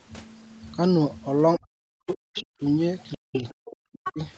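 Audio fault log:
1.57–2.62 s, speech suppressed in double talk: the echo canceller, likely unable to tell the near talker from loudspeaker echo while both sides spoke, turned everything down. The speech sinks by up to about 40 dB, in pieces adding up to roughly a second, so the talker dips, thins and drops out in fragments rather than fading smoothly. The brief leak at 2.37 s falls inside this stretch.
2.37–4.13 s, other side's voice leaking through: five short scraps at 2.37, 3.12, 3.33, 3.65 and 4.04 s, each 50 to 90 ms long, likely loudspeaker playback that the echo canceller left in the microphone signal. The levels vary: the scraps at 3.33 and 4.04 s sit only about 10 dB below the talker. The others sit about 20 to 30 dB down and come through as faint fragments of a second voice.
3.16–4.18 s, speech suppressed in double talk: a second collision in which the canceller, likely caught between near speech and returning echo, again clamped down. 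The talker drops by up to about 40 dB, with roughly 0.7 s of the stretch affected, so the speech breaks up into gaps. The leaked scraps at 3.33, 3.65 and 4.04 s fall inside this stretch, over audio that stays band-limited at 8 kHz by the call path.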